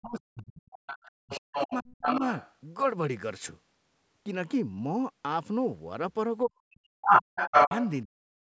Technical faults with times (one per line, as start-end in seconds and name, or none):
0.00-2.22 speech suppressed in double talk
0.72-2.55 other side's voice leaking through
6.42-7.13 speech suppressed in double talk
7.07-7.94 other side's voice leaking through
7.48-7.72 speech suppressed in double talk
8.04-8.37 speech suppressed in double talk